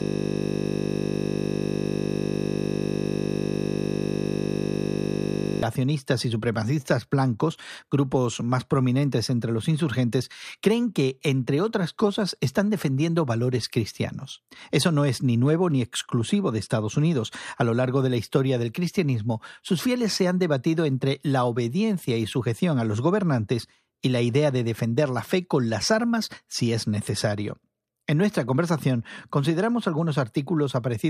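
A system hang loop, already under way at the start, kept the hardware replaying one 20 ms buffer until 5.63 s, heard as a steady 50 Hz buzz.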